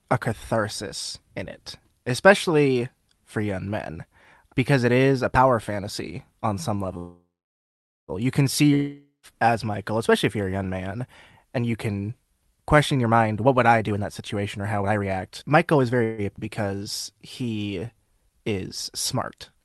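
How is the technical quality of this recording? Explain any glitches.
The speech is degraded by several network and jitter buffer faults, all between 7 and 19 s. The sound has the band-limited character of a call codec. Nothing above about 12 kHz survives, which points to Opus at a moderate bitrate.

Call audio freeze at 6.97 to 8.11 s, right after "power fantasy on some". Packets were most likely held up in transit, so the jitter buffer ran dry. The receiver stretched the last sound into a fading buzz. Then about 0.83 s of silence followed. The whole gap is about 1.1 s. Speech then resumes exactly where it stopped. Nothing is lost, but the delay grows by that amount.

A second call audio freeze comes at 16.04 to 16.21 s. It is short, about 0.14 s. It is again likely caused by late packets. This one never reaches silence. The held sound simply fades briefly before speech continues intact.

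Long network dropout at 8.74 to 9.26 s, just after "can see". No packets arrived, likely because of a network outage. The last sound decays into a short buzz, followed by about 0.12 s of silence. When audio returns, roughly 0.48 s of speech is gone for good.

Jitter buffer speed-up from 12.95 to 16.0 s. The buffer held more audio than it needed. To cut the delay, the receiver trimmed short pitch-period slices again and again. About 0.7 s was removed in total. Speech runs at about 124% of normal speed. The pitch stays the same, but the delivery sounds rushed.

Skip ahead at 16.36 to 16.41 s. A stretch of audio was discarded while later audio was already waiting. The gap is only about 16 ms long. Roughly 0.4 s of speech is missing. The two sides are spliced almost directly, so the speech seems to jump forward abruptly.

Jitter buffer slow-down from 16.75 to 18.54 s. The buffer was running low or had just raised its target delay. 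The receiver rebuilt its reserve by repeating single pitch periods and small bits of pauses. This added 166 ms. Speech plays at about 91% of normal speed. The pitch is unchanged, but sounds are drawn out and slightly sluggish.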